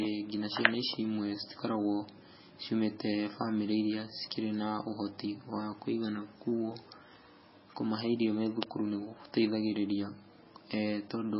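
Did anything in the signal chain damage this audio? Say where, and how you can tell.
Yes. Throughout the speech the sound is watery and swirly, s sounds chirp metallically, and nothing is present above 5.6 kHz. That points to the codec stage, likely heavy MP3 compression at a very low bitrate near 16 kbps, cutting treble and switching weak frequency lines on and off.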